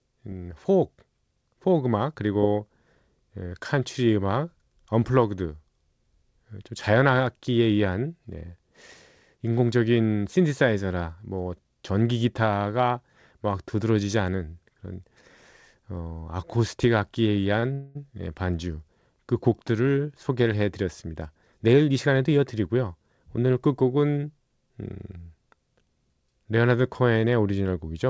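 At 17.60 to 17.65 s a sound in the speech is held slightly too long, with a faint buzz or dip. This is a short stall from a late packet: the jitter buffer ran dry, and the receiver stretched the last sound by 26 ms until the packet turned up, losing nothing.

From 17.73 to 17.97 s the speech stops moving and the last sound continues as a fading buzz or hiss for 224 ms without dropping to silence, then resumes where it left off. This call audio freeze likely came from packets held up in transit, emptying the jitter buffer and inserting a gap.

Between 21.07 and 22.39 s the speech runs hurried, about 108% of normal speed, while the pitch holds steady. This is a jitter buffer speed-up: with too much audio queued, the receiver repeatedly cut out short pitch-period slices, roughly a tenth of a second in total, to bring the delay back down. Through all of this, the G.722 call path keeps the audio band-limited, with nothing above 8 kHz.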